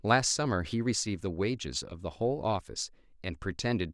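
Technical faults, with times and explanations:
No technical faults found in this speech recording.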